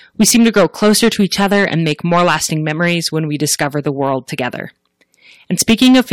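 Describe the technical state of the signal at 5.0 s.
At 5.0 s the speech is under hard clipping, as it is for the whole clip. Driven about 10 dB past full scale, a few percent of samples are sheared flat, giving harsh fuzz on loud syllables. Waveforms show squared-off peaks; spectrograms show harmonic smearing high up.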